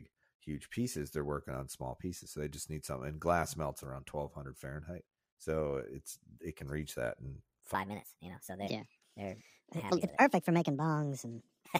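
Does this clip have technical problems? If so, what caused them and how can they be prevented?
Yes. From 7.75 s to the end at 11.80 s, the speech plays about 1.43 times too fast. A section at the wrong speed like this raises the pitch by roughly seven semitones and hurries the syllables at the same moment. That pairing separates it from a pitch-shift fault, which would move the pitch while leaving the timing intact. The likely cause is this section being resampled or clocked at the wrong rate during editing or playback. Keeping sample rates consistent across every edit and export prevents it.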